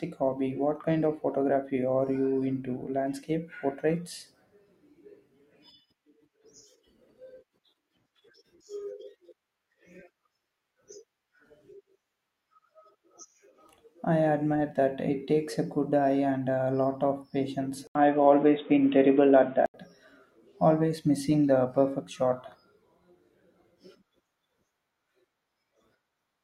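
After "a lot of patience", 17.87 to 19.74 s goes dull and boxy, nothing above 3.8 kHz, after an 80 ms gap: likely an input switched to a poorer device.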